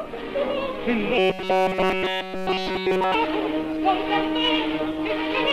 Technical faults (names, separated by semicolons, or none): robotic sound from repeated short buffers